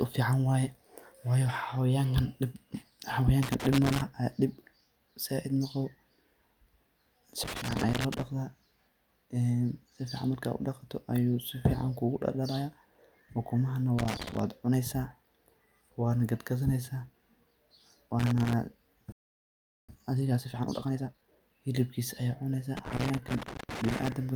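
Irregular bursts of scratchy crackle break into the speech from 3.42 to 4.02 s, 7.43 to 8.22 s, 13.99 to 14.39 s and 18.20 to 18.53 s. This is loose connector crackle: a worn or dirty contact repeatedly making and breaking, chopping the signal.

At 19.12 s the speech cuts out completely for about 0.76 s, resuming at 19.89 s. This playback stall is likely the player running dry of data or its thread being held up, leaving the output silent until it caught up.

From 19.89 to 21.41 s the speech rushes along at roughly 1.5 times normal speed, with its pitch unchanged. This is time-compressed catch-up: the player trims its backlog by cutting short slices and cross-fading the remainder together.

The connector crackle returns from 22.77 to 24.12 s, its longest burst, with the same ragged scratching as before.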